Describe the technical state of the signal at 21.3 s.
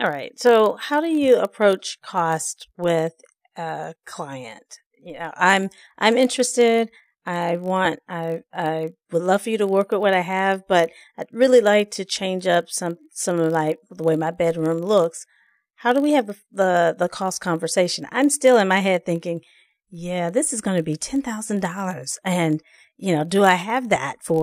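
At 21.3 s the speech is affected by a block size mismatch (padded), which runs through the whole clip. One stage hands over blocks slightly shorter than the 1024-sample blocks the next stage reads, and the shortfall in each block is filled with zeros. That tiny gap recurring every block produces a buzz at 46.9 Hz, which fits a 48 kHz stream. The added silence slows the speech only negligibly, to 0.999 of normal speed, with pitch essentially unchanged.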